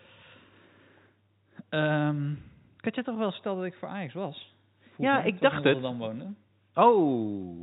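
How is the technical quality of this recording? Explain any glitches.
Nothing in this telephone-band speech recording stood out as a glitch on listening.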